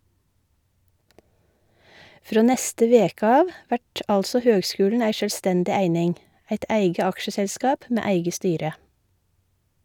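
Nothing here gives any trouble: the speech just runs along without a single technical fault to point to.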